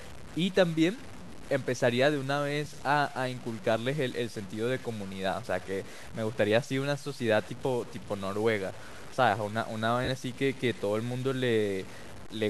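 Speech throughout carries grainy distortion that rises and falls with the voice, sitting only about 20 dB below it, likely low bit depth without dither, consistent with truncation to around 6 bits; unlike dither hiss, the grit tracks the signal and quiet stretches sputter or drop out. Lost LE Audio frames appear at 2.65 s and from 10.05 to 10.08 s, lasting 10 ms and 30 ms, which fits one and three 10 ms frames. The decoder fills each gap with a brief noisy smear rather than a clean silent hole.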